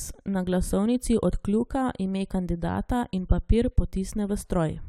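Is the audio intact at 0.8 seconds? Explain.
Yes, the speech at 0.8 seconds is intact, with no dropout, click, distortion or other fault at that moment.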